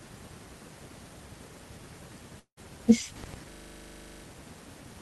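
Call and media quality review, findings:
Long network dropout, 2.39 to 2.59 s: speech smears into a fading buzz for about 0.17 s, then roughly 90 ms of silence; about 180 ms of audio never returns. Likely a packet-loss gap on the Opus call path, concealed by the decoder.

System hang loop, 3.52 to 4.24 s: a 40 ms fragment repeats 18 times, a 25 Hz buzz-stutter. The driver stalled while the playback ring buffer kept recirculating, losing roughly 0.7 s of speech.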